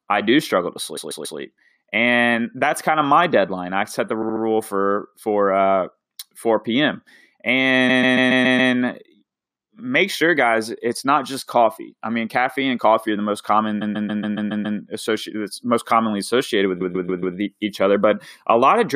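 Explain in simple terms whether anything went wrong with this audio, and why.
The speech stutters five times because of repeated frames: a short stretch of the compressed audio was stored or sent more than once, so the player plays it again. It happens at 0.96–1.38 s after "I do struggle to", 4.22–4.42 s after "deadline I set the", 7.88–8.72 s, 13.81–14.78 s, and 16.80–17.36 s after "most commonly associated with". Each repeated slice lasts 0.14 s (0.07 s the second time) and plays 3 to 7 extra times, adding up to a second each time.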